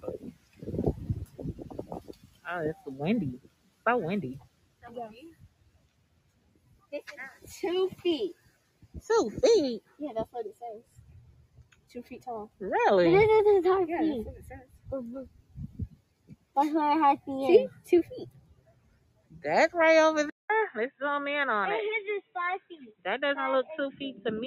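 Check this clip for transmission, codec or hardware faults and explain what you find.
One fault runs through the whole clip, with repeated moments where it bites hardest.

Across all 24 seconds the level pumps and flutters: held material sinks and tails thin out while attacks stay bright, with the level swinging by around 20 dB. This is a noise suppressor applied to music or sounds. A processor built for speech reads steady tones and decay as background noise and keeps turning them down, so sustained content keeps breathing in and out.

The sound is cut by the noise suppressor in eight stretches: 0.00–0.67 s, 1.25–3.85 s, 4.40–7.47 s, 8.34–8.99 s, 9.81–12.61 s, 14.63–16.56 s, 17.75–19.42 s and 22.22–23.05 s. In each, sustained parts drop away by about 15 to 16 dB at the deepest, and decays are clipped short for a total of 0.4 to two seconds per stretch. Here the suppressor judged the content to be noise and pulled it down harder than the rest.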